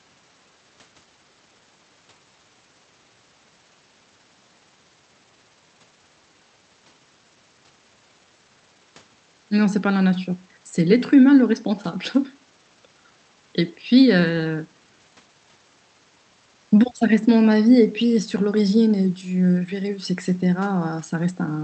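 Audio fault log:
No faults found; the speech passes through an Opus call path at 40 kbps whose band stops near 8 kHz, as expected for that link.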